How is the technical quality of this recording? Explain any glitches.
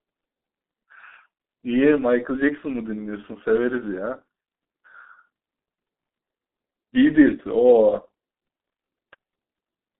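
Technical quality is poor. Throughout, G.723.1 codec damage is heavy: speech is confined to 200 Hz–3.6 kHz and coded in coarse 30 ms frames, which fits roughly 6 kbit/s. Unlike a clean narrowband line, it sounds muffled and hoarse, with smeared consonants.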